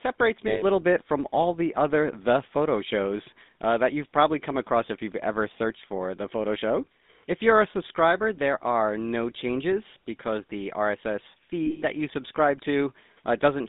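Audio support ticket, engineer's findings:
GSM full-rate codec on the whole path: pulse-excited vocal-tract model, band limited to about 200 Hz–3.7 kHz, fits 13 kbps; speech plainly buzzy and gravelly throughout.

Lost GSM frames at 0.48–0.63 s before "little bit from all" and 11.66–11.83 s before "that you subscribe": last good frame repeated, giving a rough metallic ring. The second loss is broken up, with its longest gap about a tenth of a second.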